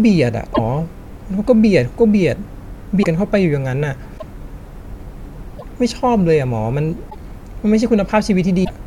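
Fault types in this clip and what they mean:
Broken MP3 bit reservoir: the speech skips ahead, with a short chirp, burst of noise or hole, at 0.54, 3.02, 4.17, 5.58, 7.09 and 8.64 s, each one or two 26.1 ms frames long. This is likely because frames were dropped, leaving later frames decoding borrowed bits from the wrong data.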